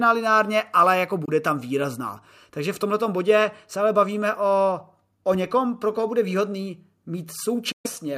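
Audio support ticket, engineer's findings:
Likely Bluetooth dropout: late packets discarded. Speech silenced at 1.25–1.30 s after "lineárně ale jako" and at 7.72–7.87 s, then resumes further on, as if it had kept playing.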